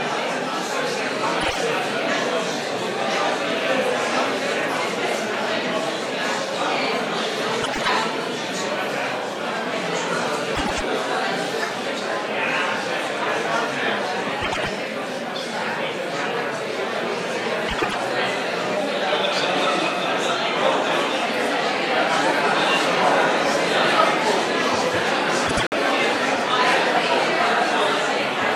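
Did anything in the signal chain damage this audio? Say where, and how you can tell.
Yes, at the network stage: frames out of order at 1.41, 7.62, 10.55, 14.41, 17.68 and 25.46 s. Each is a brief garbled flutter, where two adjacent blocks of 52 ms (first) or 104.5 ms swapped places. No time is lost.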